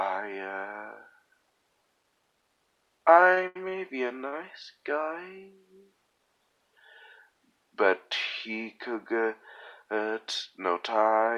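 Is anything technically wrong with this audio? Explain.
Yes, there are two network-delivery faults.

From 3.31 to 3.72 s there are repeated stalls (stutter). Packets arrived late four times, so the jitter buffer kept running dry and the receiver stretched the last sound to fill about 131 ms, the longest gap 77 ms. Nothing is lost, but about a third of that stretch is filled-in sound, giving a dragging, hiccuping rhythm. What sets it apart from a single late packet is the cluster of holds close together.

From 4.28 to 4.34 s there is a short stall from a late packet. One packet arrived about 43 ms late, the buffer emptied once, and the last sound was held until it came, then playback resumed where it left off. The result is one brief smeared hold, not a string of hiccups.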